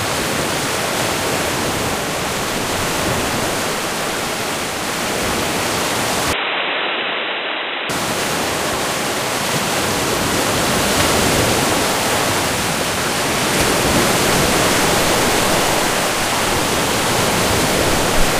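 A recording of sounds that turns dull and boxy from 6.33 to 7.90 s, with nothing above 3.9 kHz and a level drop of about 5 dB. It likely comes from the input switching to a poorer device. A spectrogram would show a flat ceiling at 3.9 kHz for that stretch, and the waveform would shrink with no gap at the switch.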